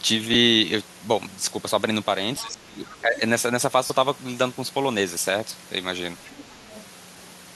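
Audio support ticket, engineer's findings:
Lost LE Audio frames. Brief gap at 0.34 s, about 10 ms, consistent with one dropped 10 ms frame. Second gap at 3.87 to 3.90 s, 30 ms long, which fits three consecutive lost frames. LC3 decoder concealment fills each gap by repeating the last spectrum with randomised signs. Result is a short noisy smear in place of clean speech.

Other side's voice leaking through. Second voice audible at 2.36 to 2.42 s, about 25 dB below the talker. Longer stretch at 2.84 to 3.19 s, about 20 dB down. Again at 6.25 to 6.84 s, about 25 dB down. Likely residual echo: far-end audio from the talker's loudspeaker reaching the mic, not fully cancelled by AEC.

Speech suppressed in double talk. Talker level dips at 2.42 to 2.83 s, deepest drop around 20 dB. Shallower dip at 3.01 to 3.21 s, around 10 dB, overlapping the leaked far-end voice. Likely AEC double-talk handling: near and far speech overlap, canceller cannot separate them, attenuates both.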